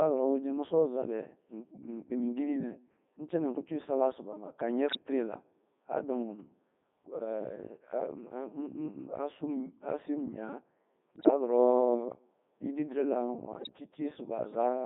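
From start to finish the speech has passed through the Codec 2 vocoder. Its robotic, buzzy quality fits the 3.2 kbit/s mode. The decoder rebuilds the sound from sine waves using only pitch, voicing, level and spectral envelope, so the original waveform is gone. A spectrogram shows neat synthetic harmonic lines confined to 200 Hz–3.7 kHz, with smeared formants.

Bit errors on digital voice radio break up the sound at 4.87–5.04 s, 11.16–11.30 s and 13.56–13.69 s. Corrupted bits, up to about 7 percent, hit the vocoder's frame parameters, so pitch, loudness and timbre jump into bleeps and warbling gibberish. A spectrogram shows blocky frame-length steps in harmonic spacing and level, and the waveform shows abrupt level jumps.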